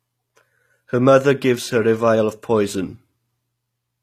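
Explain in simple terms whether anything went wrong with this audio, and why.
From start to finish the speech sounds plainly gritty and lispy on its s sounds, and the top end stops completely at 14.9 kHz. That points to HE-AAC compression, which likely stored only the lower frequencies and faked the treble by copying them upward.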